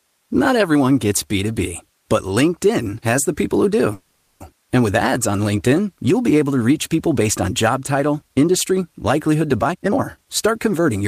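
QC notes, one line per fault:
3.93 to 4.42 s, call audio freeze: packets were held up in transit and the jitter buffer ran dry, likely because of a network stall, so the receiver kept extending the last sound for about 470 ms as a fading buzz or hiss rather than going silent. When the late packets arrived, the speech picked up exactly where it had stopped, so nothing is lost, but a pause has been inserted and the call now runs that much later.
9.62 to 11.03 s, jitter buffer speed-up: the jitter buffer was holding more audio than its target, as it would after delayed packets arrive together, so the receiver trimmed short pitch-period-sized pieces again and again to catch up. The speech plays at about 128% speed with the pitch unchanged and sounds hurried, with roughly 0.4 s of audio taken out over this stretch.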